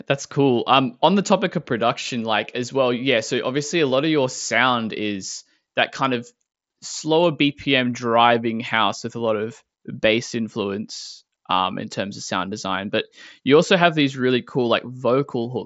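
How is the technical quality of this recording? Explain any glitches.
The technical quality of this recording is sound, with no glitches to explain.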